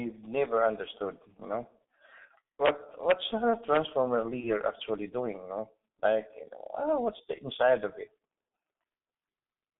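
From start to finish the speech has the muffled, hoarse colouring of the G.723.1 codec, heavily damaged. The sound is held between roughly 200 Hz and 3.6 kHz, with its consonants smeared, likely because the codec's 30 ms frames update its voice model only slowly. The thinness fits a rate of 6.3 kbit/s. On a spectrogram, energy stops sharply near 3.6 kHz, leaving the upper bands empty, and harmonics look blocky and blurred in time.

Integer overflow breaks in three times: 2.66 to 2.69 s, 3.10 s and 3.75 to 3.77 s. Loud peaks pushed a sum past its integer limit, by about 4 dB the first time and about 1 dB the second, and the last only just reached it. Instead of being capped, the value wrapped to the opposite extreme. Each burst is a harsh crack, sharper than clipping. In the waveform, samples jump from one rail straight to the other, and a spectrogram shows bright vertical streaks spanning the full band.

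At 4.40 to 4.46 s, just before "actually doing", there is VoIP packet loss concealed by the speech codec. About 30 ms of audio went missing, the length of one codec frame. The decoder filled the gap by repeating its last pitch and filter at falling gain, so the speech is briefly stretched into a fading, extrapolated sound. Because each frame builds on the previous one, the voice stays weak just afterwards. A spectrogram shows a frozen spectrum losing energy, and the waveform envelope dips.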